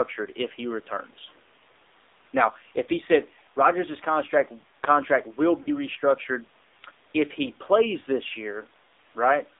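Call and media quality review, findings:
AMR narrowband mobile codec, throughout. Buzzy, synthetic speech with plainly audible codec damage; the coarseness fits a low mode around 7.4 kbps. Pulse-driven vocal tract model in 20 ms frames. Spectrogram: hard ceiling near 3.7 kHz, nothing below about 250 Hz, smeared harmonics.

Lost AMR speech frames, 5.62–5.70 s. Brief dip and warble lasting about 40 ms, which fits two lost 20 ms frames. Probable cause is radio errors failing the frame checksum. The decoder repeats the last pitch and filter settings at decaying gain. Waveform: short amplitude sag. Spectrogram: frozen, blurred harmonics, then a rough onset.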